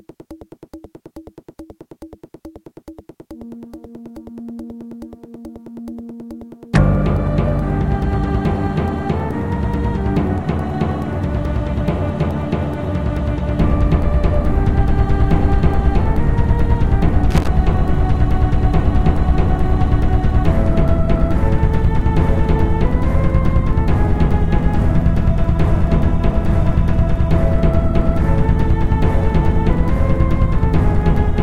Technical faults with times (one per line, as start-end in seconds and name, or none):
17.31-17.48 loose connector crackle